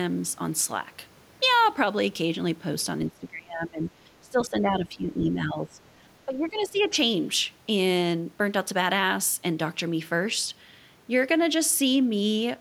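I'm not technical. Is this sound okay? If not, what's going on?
No. Speech suppressed in double talk happens from 3.09 to 5.8 seconds and again from 6.25 to 6.95 seconds: the voice sinks sharply, by a lot in the first stretch and a bit less in the second, as if someone turned it down mid-sentence. The likely cause is that both people were talking at once, and the call's echo-removal feature, unable to tell the talker apart from sound coming out of the loudspeaker, lowered everything.

The other side's voice leaking through appears briefly from 6.62 to 6.88 seconds, inside that second dip: a faint second voice, well below the main talker, slips into the recording. This is likely the far end's voice playing from the talker's loudspeaker and being picked up by the microphone, because the echo-removal feature didn't fully clean it out before sending the audio on.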